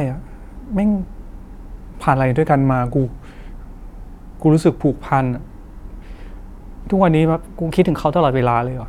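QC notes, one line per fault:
2.51–4.95 s, drift correction step: likely a clock-matching stage slowing playback in one jump to rebalance its buffer. The speech runs about 5.9% slow and drops about 105 cents, roughly a semitone, then snaps back at 4.95 s.
7.34–8.40 s, drift correction step: likely the same process, this time speeding playback up by about 5.9%. The speech rises about 99 cents, close to a semitone, and rushes until it returns to normal at 8.40 s.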